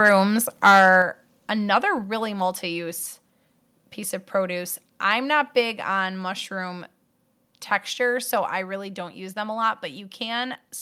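Microphone overload at 0.05 to 0.15 s and again at 0.64 to 0.96 s gives this speech recording a harsh, crackly edge on its loudest moments. The likely cause is an input level set too high, so peaks would have run about 2 dB and then about 8 dB past the converter's ceiling. Their tops are flattened, with a few percent of samples clipped in the first burst and several percent in the second. A microphone volume step-down follows at 1.02 s, where voice and background drop together by about 5 dB. A second, smaller drop of about 2 dB comes at 2.04 s, just before "multi use." Each sudden change is probably the call software reacting to the distorted peaks by lowering the microphone's input volume in one step rather than fading it.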